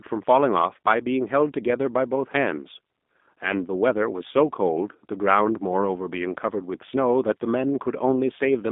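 From start to end the speech carries G.729 codec damage, plainly audible throughout. The line is limited to roughly 200 Hz to 3.6 kHz, with nothing above 3.7 kHz, and the codec rebuilds each frame from a vocal tract model and a few pulses. The result is a rough, slightly synthetic quality to the speech, which fits an 8 kbit/s G.729A stream. That graininess is what sets it apart from simple telephone band-limiting, which only sounds muffled.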